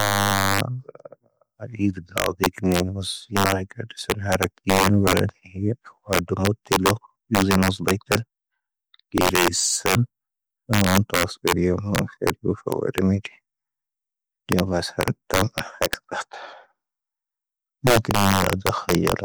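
A gain stage about 3 dB too hot lets integer overflow wrap peaks to the opposite sign throughout, so under one percent of samples produce sharp, violent cracks on loud speech.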